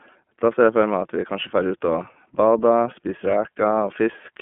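Throughout, the iLBC codec codes each 30 ms frame independently and leaves nothing above 3.6 kHz, so the speech sounds band-limited and roughly synthetic rather than merely muffled, fitting 13.33 kbps.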